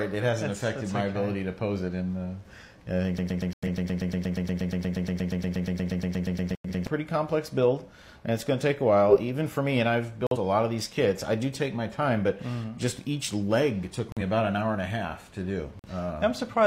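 From 3.18 s to 6.87 s a broken-record loop repeats one piece of about 119 ms back to back, 31 times, so nearly four seconds of new audio never arrive. A stall in the player or stream is the likely cause. Unlike a dropout, it cycles the same fragment exactly.

Corrupt frame muted holes cut into that loop at 3.52 to 3.68 s and 6.52 to 6.69 s. Later ones follow at 10.27 to 10.37 s, 14.12 to 14.22 s and 15.79 to 15.90 s. Each is abrupt silence lasting one to four frame lengths, where the decoder rejected damaged data. Timing carries on afterwards, which sets these apart from a stall.

At 9.09 to 9.16 s comes a corrupt frame decoded. Damaged data, roughly two frames' worth, was played anyway. Misread gains put energy at the wrong frequencies, and it comes through as a short, harsh burst peaking around -5 dBFS, a blip of noise.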